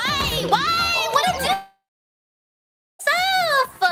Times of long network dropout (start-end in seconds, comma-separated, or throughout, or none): 1.53-3.01